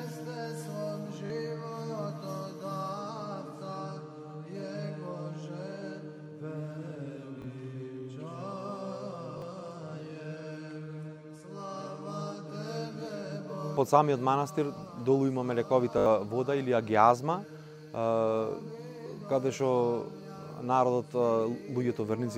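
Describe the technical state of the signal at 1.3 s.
New audio arrived late, so from 1.26 to 1.3 s a repeated buffer played the same 20 ms piece twice more, producing a brief buzzy stutter with hard joins.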